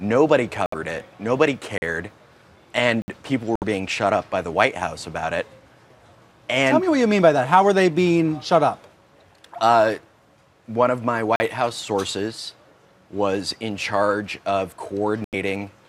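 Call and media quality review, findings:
Short holes at 0.66–0.74 s, 3.56–3.64 s and 15.24–15.34 s. Output drops out and resumes further along, as if playback continued. Likely Bluetooth dropout, with about three to four packets missing the headphones in time.

Block of digital silence at 1.78 s (40 ms), 3.02 s (60 ms) and 11.36 s (40 ms). Hard cut to silence, consistent with the output buffer not being filled in time.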